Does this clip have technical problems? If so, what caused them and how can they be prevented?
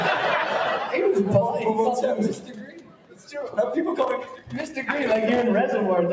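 Yes. A speech-oriented noise suppressor was left on, treating steady parts of the sound as noise; levels swing by roughly 10 dB throughout, pumping and thinning sustained material. Disable noise suppression or use a music mode for non-speech sources.

The same suppressor cut sound from 2.34 to 3.30 s, dipping about 11 dB, and from 4.36 to 4.52 s, about 10 dB. Held and decaying portions sink while attacks survive. Bypassing the suppressor prevents this.

Processor overload crackle runs from 3.98 to 5.43 s. Around a hundred missed deadlines each drop in a tiny silent gap, which fits buffers of roughly 1.5 ms, producing gritty tearing. Reduce CPU load or enlarge the audio buffer.

The call's microphone path, which carries nothing above 8 kHz, shows no fault of its own.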